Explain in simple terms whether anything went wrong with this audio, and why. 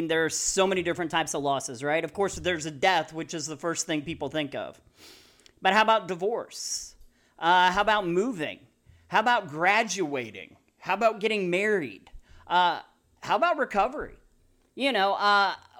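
Three times the speech jumps about a semitone off pitch and about 6% off speed, the first two times snapping back: a drift correction step, likely from clock-matching software. It happens at 0.99–2.36 s after "there are so many" (faster, higher), 10.03–11.12 s before "getting married" (slower, lower), and from 14.38 s to the end after "how about recovery" (faster, higher). Unlike tape wobble, each shift is a single sudden jump rather than a slow waver.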